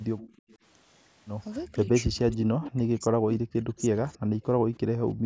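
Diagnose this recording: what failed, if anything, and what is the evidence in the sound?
Echo leak at 0.18–0.57 s, 2.32–2.36 s, 4.08–4.19 s and 4.75–4.79 s: a faint copy of the speech trails it by 310 ms, about 20 to 35 dB down. This is likely an incomplete echo cancellation stage at a loudspeaker end. The fixed delay distinguishes it from room reverberation, which decays smoothly rather than repeating.

Speech suppressed in double talk at 0.22–0.27 s, 1.66–1.88 s and 2.12–4.71 s: the speech dips by roughly 10 to 15 dB in the short spans and by as much as 40 dB in the long one. Cuts in the long span total about two seconds. The likely cause is the canceller attenuating both talkers during overlap. Dropouts from packet loss do not follow overlap like this.

Background gated by the echo canceller from 4.99 s to the end: the room sound falls by about 37 dB for roughly 0.2 s while the loudspeaker plays. 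Because the floor is pushed down hard rather than the audio stopping, this is call-processing gating, not a recording cut.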